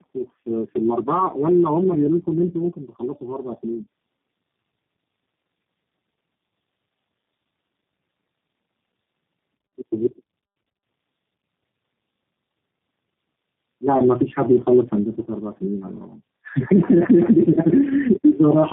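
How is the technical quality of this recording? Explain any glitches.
The quality is poor, with one fault degrading the entire clip. Tandem speech coding runs throughout: the call crossed three speech codecs in a row, AMR-NB at 5.9 kbit/s, then AMR-NB at 7.4 kbit/s, then G.729A at 8 kbit/s, with G.711 links between them. Each codec re-encoded the previous one's already damaged output, so the speech sounds rough, muffled and warbly, with nothing above 3.5 kHz.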